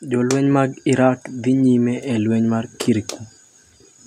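From 0.05 s to 2.77 s the automatic gain control is rising: finding the speech input too quiet, it raises gain by about 6 dB over nearly three seconds. Voice and background noise swell together, which separates it from a speaker simply talking louder.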